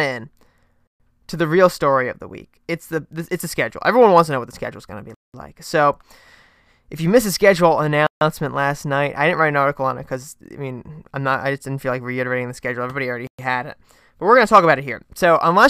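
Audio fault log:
0.87–1.00 s, 5.14–5.34 s, 8.07–8.21 s, 13.27–13.39 s: Bluetooth stall. The speech cuts to dead silence for 127, 195, 145 and 116 ms: after "schedule is gonna be", between "you missed the schedule" and "last night I didn't", and before "had it but we're". Each time it then resumes. The likely cause is radio interference delaying packets until the headphone buffer ran empty and playback waited for the resent data.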